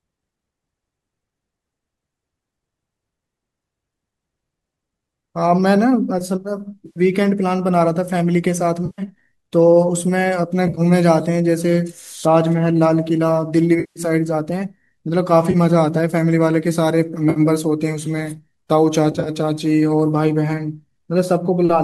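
AAC frame loss with concealment breaks the speech seven times: 6.86–7.00, 8.86–9.02, 10.67–10.81, 13.80–14.00, 15.51–15.56, 17.30–17.40 and 19.12–19.29 s, losses of 30 to 160 ms, split into short runs at 10.67 and 19.12 s. The decoder, likely low-delay AAC, refills each gap from earlier spectrum, leaving brief smeared, noisy patches.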